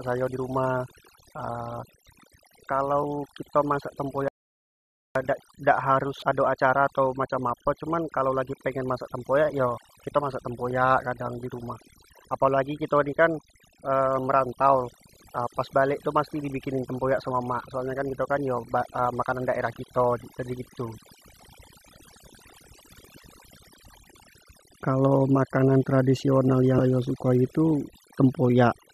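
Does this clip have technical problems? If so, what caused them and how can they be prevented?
Yes. Overdone noise removal runs through the whole speech clip: the suppressor pushes bands near its noise estimate almost to nothing, leaving a lowered background that breaks up into twinkling specks. Unlike a plain gate, it chews individual frequencies. Use gentler reduction settings.

An audio dropout to silence runs from 4.28 to 5.15 s, losing about 0.87 s. The gap is silent with no room tone, unlike noise removal's speckled floor, so the likely cause is a lost input. Secure cables, connections and mute controls before recording.

Damaged data in a compressed stream appears at 6.19 to 6.23 s and 26.76 to 26.79 s as short blips. The decoder misreads corrupted frames and resyncs, which sets these apart from silent dropouts. Use checksummed, reliable transfer and storage.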